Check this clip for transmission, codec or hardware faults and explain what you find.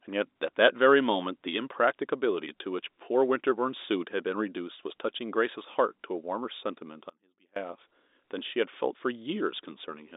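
One fault stands out in this telephone-band speech, which passes through G.711 A-law coding with nothing above 3.8 kHz. An audio dropout to a faint residue runs from 7.10 to 7.56 s. For 0.47 s the speech is likely lost upstream while the line stays open, so the gap holds only a faint residue about 30 dB down. The cut and the return are both abrupt.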